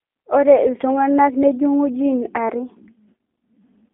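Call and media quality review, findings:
G.729 codec, throughout: speech band-limited to telephone line, roughly 300 Hz to 3.5 kHz, nothing above 3.6 kHz. Rough, synthetic texture from 8 kbit/s pulse-based reconstruction. Spectrogram: hard ceiling near 3.6 kHz, empty above.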